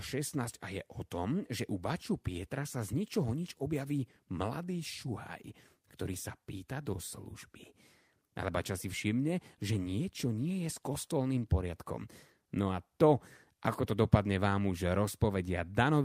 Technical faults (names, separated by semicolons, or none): none